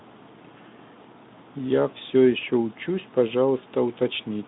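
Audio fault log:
No faults were found in this speech clip. The Speex path is audible as a telephone-style band from about 150 Hz to 3.7 kHz with nothing above about 3.8 kHz, and its light coding texture fits a rate near 15 kbps.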